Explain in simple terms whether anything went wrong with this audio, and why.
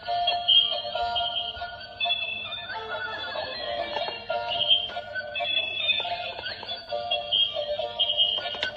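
AAC frame loss with concealment: at 3.61 s, and 6.83 to 6.88 s, brief smeared patches replace lost audio, rather than clean silent dropouts, suggesting one and two missing frames.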